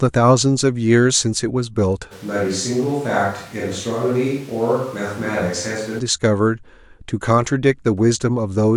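From 2.13 s to 5.98 s the speech abruptly turns hollow and roomy, with thinner bass, a level roughly 5 dB lower and background noise rising to around 25 dB below the voice. This is a switch to a distant microphone, likely because the close microphone's signal dropped out.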